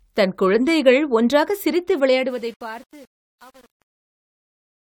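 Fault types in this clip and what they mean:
Truncation distortion on a fade: from 1.94 s, after "தன் குழந்தைகள் ஒன்றாகச் சிரித்து", the speech fades out and turns gritty, worst from 2.16 s to the end. The fade keeps too few bits and adds no dither, which fits an 8-bit stage, so the fading waveform collapses into coarse steps.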